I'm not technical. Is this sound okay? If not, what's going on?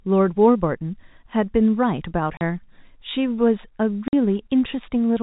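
No. The speech cuts to dead silence twice: at 2.37 s for 40 ms, and at 4.08 s for 50 ms. This is packet loss filled with silence. Small chunks of audio went missing on the way and were replaced with nothing.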